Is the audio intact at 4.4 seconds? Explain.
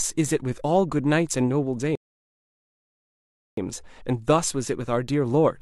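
Yes, the audio is intact at 4.4 s, with no fault of any kind at that moment.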